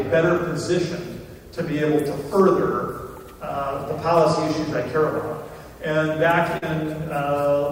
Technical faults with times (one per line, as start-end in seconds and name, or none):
2.40-2.50 hard clipping
6.57-6.64 short concealed packet loss